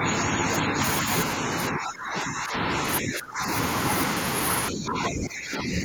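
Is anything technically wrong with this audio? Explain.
Yes. Speech suppressed in double talk occurs four times: 0.0 to 0.8 s, 1.7 to 2.82 s, 3.01 to 3.45 s, and 4.7 s to the end. The cause is likely an echo canceller that, with both sides talking at once, could not tell this talker from loudspeaker echo and attenuated both. The speech sinks and thins. The first dip is only a few dB, the later ones about 15 to 20 dB, deepest around 3.0 to 3.5 s.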